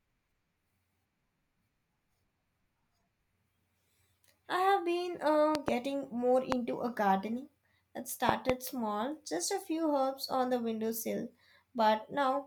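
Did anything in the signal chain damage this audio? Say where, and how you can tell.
Yes: loud pops at 5.55–5.70 s (two), 6.52–6.54 s and 8.29–8.52 s (two), with the speech continuing underneath. These are likely voltage spikes in the analogue wiring, from a plug, switch or static.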